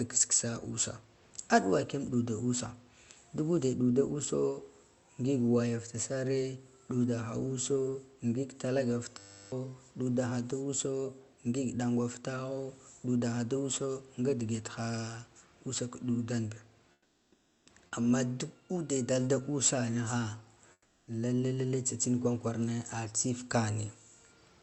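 A system hang loop runs from 9.18 to 9.52 s: one 10 ms piece repeats 34 times, giving a steady 100 Hz buzz while roughly 0.3 s of speech is lost. Comfort noise in place of the background appears from 16.92 to 17.66 s and from 20.72 to 21.07 s. The real room background gives way to flat, featureless hiss about 7 dB quieter, likely from Opus discontinuous transmission in the call path.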